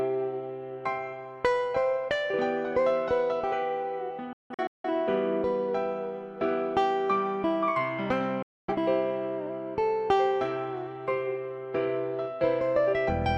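Digital broadcast dropouts occur at 4.33 s and 8.42 s. The receiver stopped getting valid frames and muted, cutting out over 3 ms and then returning. The first leaves several holes totalling 384 ms across 512 ms, the longest 170.7 ms. The second loses 256 ms.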